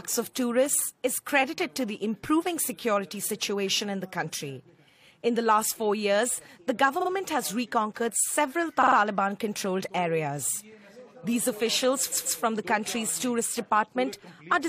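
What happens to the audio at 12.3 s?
The audio stutters from 12.11 to 12.39 s. This is repeated frames. A run of compressed frames was sent again, so a 139.3 ms block plays two extra times. The same fraction of a second recurs, and the audio grows 278.6 ms longer.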